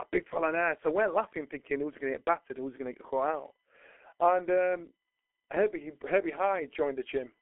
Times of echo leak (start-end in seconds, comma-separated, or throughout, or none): none